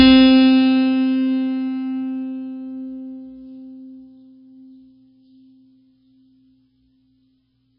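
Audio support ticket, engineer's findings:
MP3 compression, throughout: treble gone above 5.4 kHz, heavy watery swirl. Likely a bit-starved MP3 encode near 16 kbps, weak frequency lines dropping in and out.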